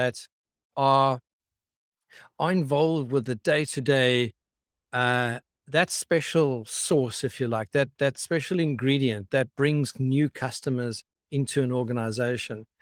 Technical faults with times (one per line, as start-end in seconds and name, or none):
none